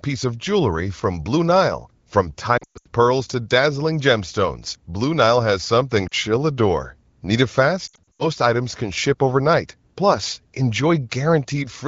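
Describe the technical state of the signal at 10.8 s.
At 10.8 s the speech comes through intact, carried cleanly by the AMR wideband (HD Voice) codec with no fault present at that moment.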